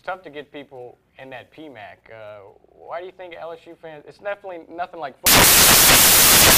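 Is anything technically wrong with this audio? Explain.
Yes. From 5.26 s to the end at 6.57 s, the samples are built from the wrong bytes: misaligned or swapped byte order makes the fast-changing low bits dominate. It sounds like loud, harsh broadband noise, and shows as flat full-band energy on a spectrogram.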